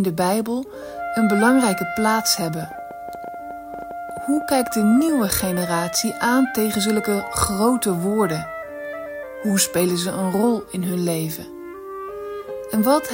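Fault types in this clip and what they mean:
train of clicks: a run of similar sharp pulses, about 9.5 per second at uneven spacing, roughly thirty in all, likely from nearby equipment interference, rising above the sound rather than a single isolated click.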